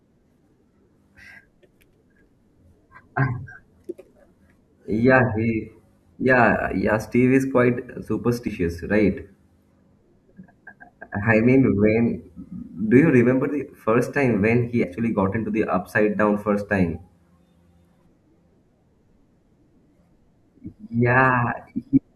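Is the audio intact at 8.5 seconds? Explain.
No. At 8.47 s the speech jumps ahead: compressed frames are skipped, so about three frames, roughly 70 ms of audio, are never played. Frames here last 21.3 ms, and the decoder moves straight from the last good frame to the next one it accepts. Unlike a dropout, no silence is inserted. The timeline simply closes up, and a piece of the speech goes missing.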